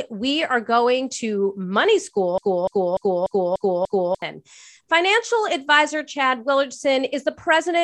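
From 2.38 s to 4.22 s the speech is caught in a broken-record loop: a 294 ms fragment plays six times back to back, likely because the player or stream stalled and resent its last buffer. The waveform shows identical blocks, and the spectrogram shows a repeating pattern with hard seams. The speech due in that span is lost.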